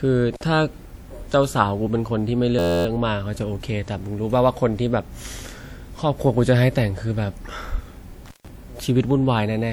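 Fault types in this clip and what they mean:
Intermittent contact: Two brief dropouts with crackle at their edges and faint hiss in the gap, one near 0.34 to 0.43 s with the line open for about 48 ms, and a longer one near 8.26 to 8.48 s open for about 140 ms. A loose plug or cable briefly lost connection.
System hang loop: From 2.59 to 2.86 s the speech turns into a steady buzz at 86 Hz as one 11.6 ms slice repeats exactly 23 times. A froze while the audio hardware kept replaying the same ring buffer, which fits a 512-sample buffer.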